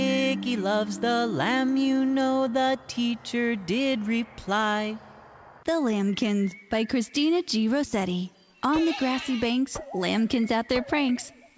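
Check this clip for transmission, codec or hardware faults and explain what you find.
No transmission, codec or hardware fault is audible; the band stops at 8 kHz, which fits a wideband call codec such as G.722 working as intended.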